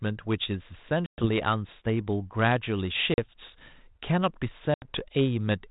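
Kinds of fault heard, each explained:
Packet loss on an ADPCM call: lost packets leave three hard-edged silent gaps, about 120 ms at 1.06 s, 40 ms at 3.14 s and 80 ms at 4.74 s. The decoder's predictor and step size lose track, so speech returns slightly distorted, then settles.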